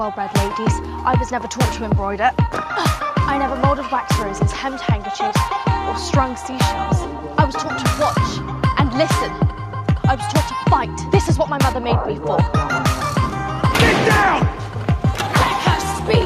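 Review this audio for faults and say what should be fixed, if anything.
Nothing in this recording needs fixing, as no faults can be heard anywhere in it. It can be left as it is.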